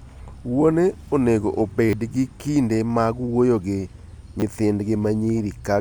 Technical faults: repeated buffer

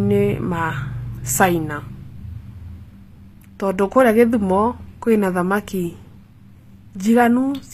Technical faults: HE-AAC compression

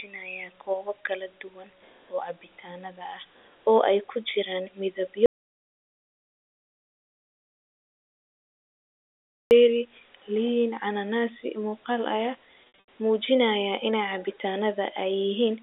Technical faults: audio dropout to silence; packet loss with pitch repetition

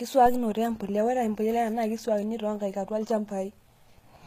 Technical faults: HE-AAC compression

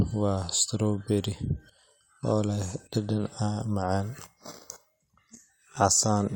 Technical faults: none

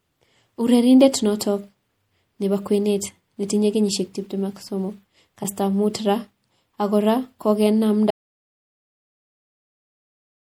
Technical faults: MP3 compression; corrupt frame decoded; audio dropout to silence

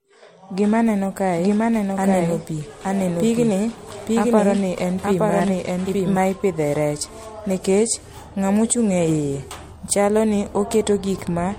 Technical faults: generation loss; doubled audio track

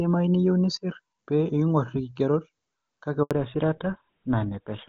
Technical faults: handover gap; fallback to narrowband

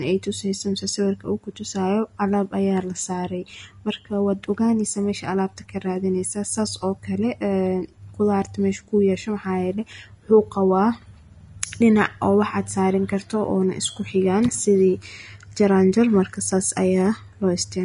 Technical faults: Vorbis compression

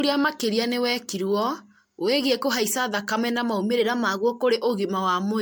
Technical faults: generation loss; drift correction step

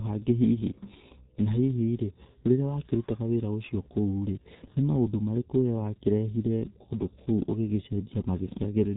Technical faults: G.723.1 codec; computer activity noise

